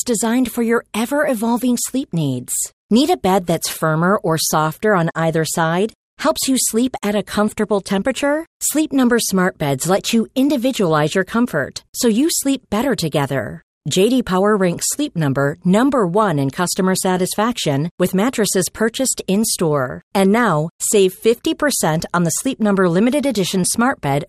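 Throughout the speech the sound is dull and plainly gurgling, with a granular edge on the quieter upper content. The likely cause is MP2 compression at a rate that fits roughly 80 kbps. Too few bits reach the 32 sub-bands, so upper bands drop out and flicker while the remaining ones are coarsely quantised. Unlike the burbling below, this damage is constant.

From 3.70 to 3.81 s and again from 9.96 to 10.00 s there is DAB burbling: short blips of noise laid over the speech. Uncorrected bit errors at a low rate, around a tenth of a percent, corrupt samples across what sounds like about four frames. Single sub-bands then pick up short blips of noise. These events are brief and sudden, which sets them apart from the even dullness of the compression.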